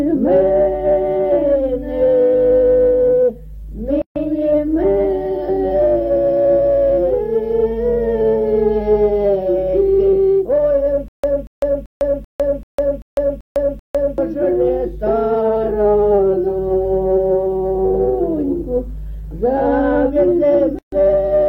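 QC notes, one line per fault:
4.02 s and 20.79 s: gap at a join of encoded pieces. Continuous sound drops out for 142 ms at the first point and 136 ms at the second. Both dropouts have edges smeared by the codec, and the sound resumes exactly where it left off. This fits separately encoded segments joined without trimming, where each encoder run's leading delay and padded final frame remain in the file as silence.
11.08 to 14.18 s: stutter with silent gaps. A 234 ms burst of the same sound repeats 8 times at a steady 387 ms period, with 153 ms of digital silence after each repeat. The material that should have played across this span is missing. The likely cause is a stalled player or stream that replayed its last buffered fragment on each retry and then ran dry before the next attempt.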